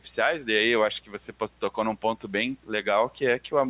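Speech carrying a steady mains hum at 60 Hz, a low tone sitting roughly 15 dB below the voice for the whole clip, most likely from a ground loop or nearby transformer leaking the power line into the signal; on a spectrogram it draws a continuous horizontal line at 60 Hz with low harmonics stacked above. Between 1.05 and 1.41 s the speech is cut by the noise suppressor, which mistook parts of it for background and pulled them down by as much as about 11 dB, roughly 150 ms in all, so those sounds come out swallowed and faint; the waveform shows the envelope sagging there, and the spectrogram thins out those syllables. Everything above 4 kHz is absent, a clean ceiling that fits a narrowband telephone-style call path.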